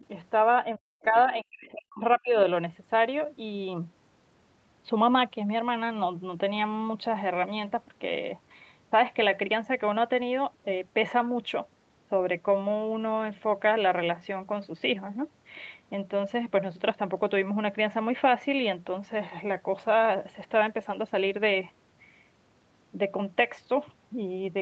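From 0.78 to 2.37 s the talker's speech drops in and out, sinking by as much as about 40 dB across roughly a second in total. This is speech suppressed in double talk, likely the echo canceller clamping down while both sides spoke. Inside that stretch, from 1.02 to 1.19 s, a brief faint scrap of a second voice, about 25 dB below the talker, comes through. This is the other side's voice leaking through, likely residual loudspeaker echo the canceller missed. It is a separate voice, not a smeared copy of the talker's own, which sets it apart from reverberation. The whole clip stops at 8 kHz, as the call path normally does.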